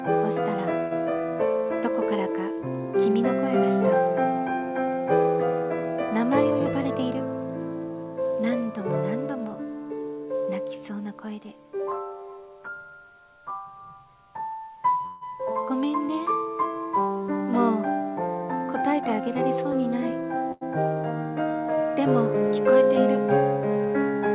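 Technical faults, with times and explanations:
0.80–0.93 s and 15.06–15.23 s, call audio freeze. The last sound carries on as a fading buzz or hiss for 108 ms, then 154 ms. Packets were likely held up and the jitter buffer ran dry. The audio then resumes where it stopped, so nothing is lost, only delayed.
6.44–7.12 s and 18.41–19.73 s, jitter buffer speed-up. The audio runs fast at unchanged pitch, at 115% and then 108%, and sounds hurried. The buffer had grown too full, so the receiver trimmed many short pitch-length slices. Each stretch drops roughly 100 ms.
20.52 s, short stall from a late packet. One sound is held 92 ms too long, with a slight buzz or dip. A packet arrived late and the jitter buffer emptied. The receiver stretched the last sound to fill the wait, then continued from the same point. Nothing is missing.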